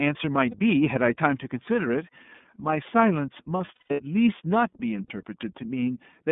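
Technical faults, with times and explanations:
throughout, iLBC codec: Rough, slightly synthetic narrowband speech confined to about 150 Hz to 3.6 kHz, which fits iLBC at 13.33 kbps coding each 30 ms frame independently.
0.51 s, 3.57–4.01 s, 5.07 s, lost iLBC frames: Brief held, buzzy vowel sounds where the decoder repeated the last pitch cycle; the middle stretch has scattered gaps totalling 270 ms over 420 ms, with runs up to about 150 ms.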